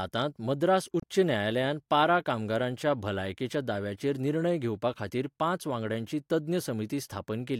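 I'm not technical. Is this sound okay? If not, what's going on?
No. At about 1.00 to 1.04 s, just before "न्यायालयान पारा कामगारांच्या भलायकेच्या", a short glitch marks damaged data in a compressed stream. The broken file briefly disrupts the audio at that spot.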